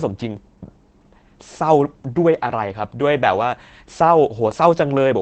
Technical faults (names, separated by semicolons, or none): Opus voice compression